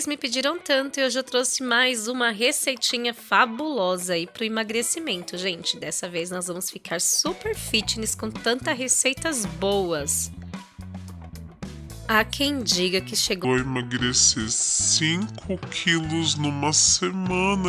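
Wrong sample rate, from 13.44 s to the end at 17.68 s: for this final stretch the audio runs at 0.667 of its proper speed and drops about 7 semitones in pitch, so everything sounds lower, heavier and dragged out. The samples are being clocked out more slowly than they were captured, without any rate conversion, so speed and pitch fall together by the same ratio. That two-thirds relationship fits 48 kHz material played back at 32 kHz.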